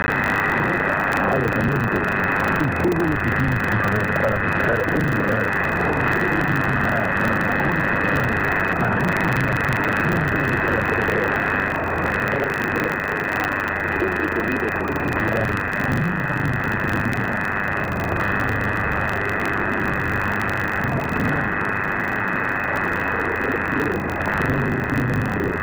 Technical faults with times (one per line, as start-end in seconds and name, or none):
0.00-25.62 buffer tearing